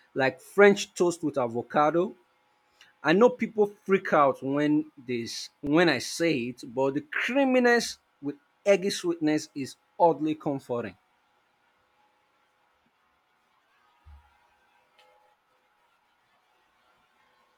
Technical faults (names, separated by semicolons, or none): repeated buffer